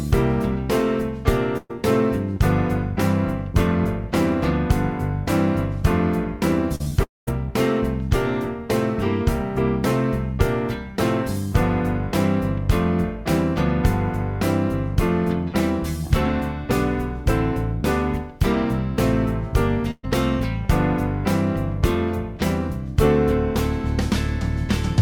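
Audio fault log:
1.57 to 1.71 s, burst of packet loss. About 120 ms of audio goes missing here. The receiver keeps the last sound going to cover the hole, then lowers it. A voiced sound turns into a held buzz, anything else into a fading hiss. A brief silence of about 10 ms follows before the sound picks up again. What fell inside the gap is simply gone.
6.75 to 6.93 s, short concealed packet loss, three in a row. The gaps sit at 6.75 to 6.82 s, 6.84 to 6.88 s and 6.90 to 6.93 s. About 40, 20 and 20 ms are lost. Each hole is patched by extending the preceding sound, pitched or noisy, then blended back. The result is a quick smear or wobble, repeated three times. A short consonant could drop out.
7.03 to 7.29 s, long network dropout. About 240 ms of audio never plays. The fill carries the last sound on briefly, then fades. Roughly 180 ms of near silence remains before the sound returns. 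The return lands further on, skipping what was lost. The cluster of losses just before points to a likely network stall as the cause.
19.91 to 20.05 s, burst of packet loss. Another run of about 120 ms is lost. Again the last sound is stretched and faded, heard as a buzz or hiss. About 20 ms of silence precedes the restart. The audio then resumes with that stretch removed.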